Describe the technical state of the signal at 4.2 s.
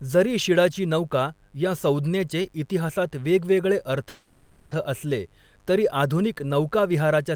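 At 4.2 s the speech stops moving forward. From 4.09 to 4.73 s a call audio freeze stretches the last sound into a fading buzzy hiss that fills about 620 ms without falling silent. The speech then resumes exactly where it left off, so nothing is lost but everything after arrives 620 ms late. The likely cause is packets held up in transit, leaving the receiver's jitter buffer empty.

Under this, a steady raspy mains buzz sits about 40 dB below the speech. Sharp switching spikes occur twice in each 50 Hz cycle, so the buzz carries harmonics of 50 Hz that reach up into the kilohertz range.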